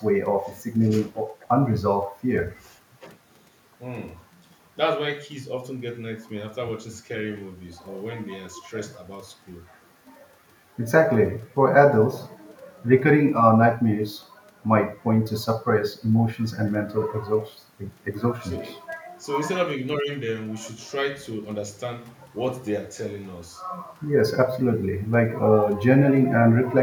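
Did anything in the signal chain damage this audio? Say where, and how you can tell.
No, nothing in the signal chain damaged this recording.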